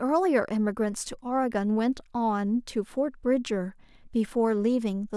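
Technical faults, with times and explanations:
Listening to the speech in full, nothing stood out as a technical problem at any point.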